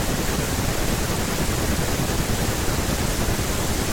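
No technical faults can be heard anywhere in this speech recording. There is nothing in it for a listener to flag.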